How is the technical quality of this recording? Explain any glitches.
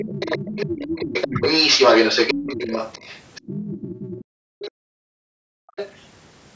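The recording has clear echo-control problems: another voice leaks through for much of the clip, the main talker dips briefly, and the background drops out for over a second.

Other side's voice leaking through, 0.0 to 4.24 s, then 4.59 to 4.71 s and 5.68 to 6.05 s. A second voice sits under the speech, as loud as the talker at first and later about 15 dB quieter, first in one long stretch and then in short scraps. The likely cause is loudspeaker playback reaching the microphone that the echo canceller failed to remove.

Speech suppressed in double talk, 1.28 to 1.42 s. For a fraction of a second the talker's level sinks sharply while both voices overlap. The canceller likely could not separate the talker from the echo, so it pulled the whole signal down.

Background gated by the echo canceller, 4.24 to 5.68 s. The room sound falls away by up to about 40 dB for roughly a second and a half, then returns. 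The canceller clamped the microphone hard during loudspeaker playback and released it afterwards.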